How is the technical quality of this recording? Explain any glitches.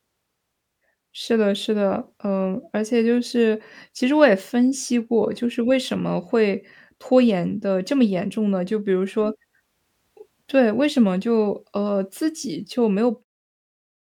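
No glitches can be heard in this speech recording.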